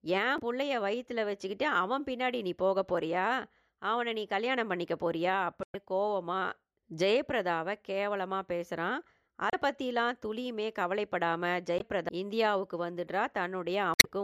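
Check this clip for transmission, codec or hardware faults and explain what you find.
There's one kind of fault here, damaged data in a compressed stream, turning up five times in the speech: 0.35–0.41 s, 5.63–5.76 s, 9.50–9.55 s, 11.77–11.82 s and 13.94–14.06 s. Corrupted bytes throw the decoder off, so it garbles those frames and hunts for the next valid header. Each one comes through as a short chirp, squawk, click or hole.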